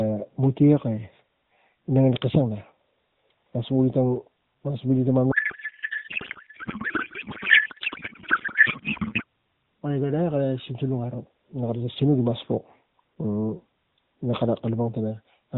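From 5.32 to 9.24 s a codec payload misread takes over the AMR narrowband stream: octet-aligned frames are parsed as bandwidth-efficient, so the speech becomes garbled warbling noise barely following it, sustained rather than clicking in and out as packet loss would.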